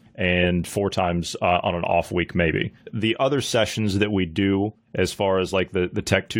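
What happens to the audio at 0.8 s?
Nothing goes wrong at 0.8 s; the speech carries on intact through that moment, with no dropout, click or distortion.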